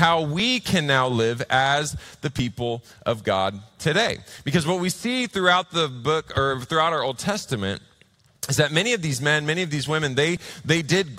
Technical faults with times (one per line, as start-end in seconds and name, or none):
0.40-10.37 periodic USB or driver dropouts